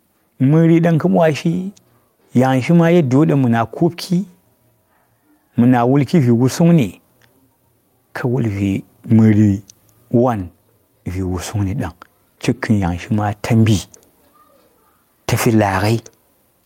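Gain pumping runs through the whole speech clip. The gain swells between phrases, then ducks by around 10 dB under loud sounds. Overdriven input gain hitting a fast limiter is the likely cause.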